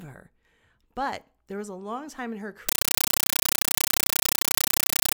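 From 2.69 s, after "long time in her", a compressed stream played as audio takes over. Undecoded bitstream bursts 31.25 times a second: loud, chattering static.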